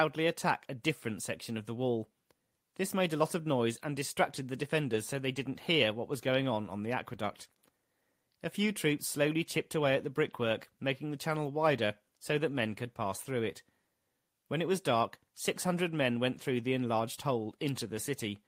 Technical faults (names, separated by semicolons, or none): none